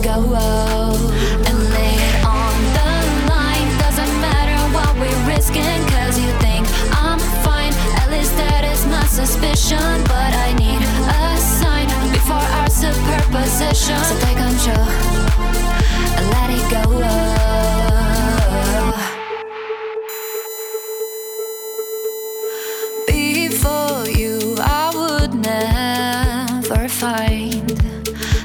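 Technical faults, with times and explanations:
20.09 to 25.01 s, USB whine: a steady, fixed-pitch tone comes in here, built on 1 kHz but loudest up at its 14 kHz harmonic, sitting roughly 15 dB under the audio. That's the USB bus pulling current in 1 ms frames, and the rhythm leaking into the analogue side through shared power or ground. Because the frame rate never wavers, you get a rigid pitched whine with a thin, piercing top.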